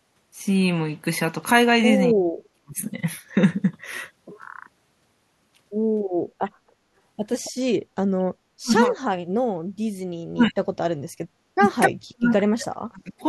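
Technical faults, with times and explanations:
2.13–2.81 s, 8.6–8.96 s, 10.31–10.57 s, 11.56–11.68 s and 11.87–13.13 s: speech suppressed in double talk. The speech drops sharply, by up to about 40 dB. This is likely an echo canceller treating simultaneous far-end talk as echo and attenuating the near-end speech along with it.
7.44–7.51 s: echo leak. A short, faint scrap of the speech returns 275 ms late, roughly 20 dB below the direct sound. This is likely a loudspeaker-side echo canceller failing to fully remove what its microphone picked up, letting a delayed copy through.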